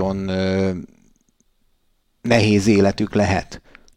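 No technical faults can be heard in this recording.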